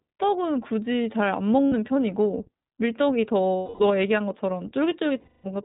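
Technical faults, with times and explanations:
Throughout, iLBC codec: the speech is band-limited, with nothing above 4 kHz, and has a plainly audible rough, slightly synthetic edge. iLBC codes each frame's excitation on its own rather than predicting from the previous frame, which trades smoothness for robustness. The character fits its 15.2 kbps mode with 20 ms frames.
1.67–1.74 s, 3.56–3.84 s and 5.20–5.46 s, lost iLBC frames: the first gap lasts 60 ms, which fits three lost 20 ms frames. The other two last 240 ms each. In every gap the decoder repeats the last pitch cycle blended with noise, so the speech becomes a held, buzzy, breathy vowel that fades across the longer gaps. Because iLBC frames stand alone, the speech recovers almost immediately afterwards.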